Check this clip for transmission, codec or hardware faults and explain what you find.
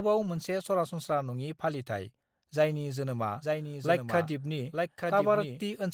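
One fault: a doubled audio track. From 3.41 s, just after "जायनि जोनोमा", to the end, the audio is likely being captured a second time through a slower path, so a second full-band copy runs about a second behind, roughly 5 dB quieter, beneath the light Opus coding. It enters abruptly, with no decay or room colour.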